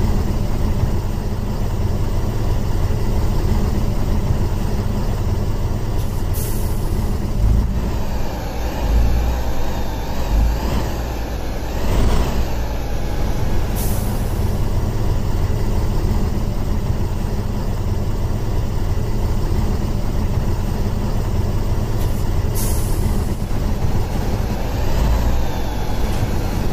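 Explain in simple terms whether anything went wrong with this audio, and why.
Nothing went wrong that I could hear: listening all the way through, nothing in the sound stood out as a problem.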